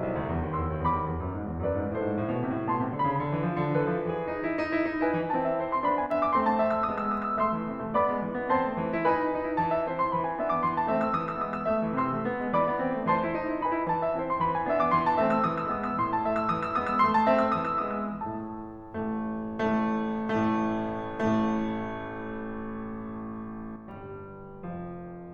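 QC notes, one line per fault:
6.06–6.11 s, one channel drops out: a quick 50 ms dip of about 6 dB in the music, likely one stereo side briefly vanishing before the mono sum.
23.76 s to the end, one channel drops out: same roughly 6 dB fall, held to the finish.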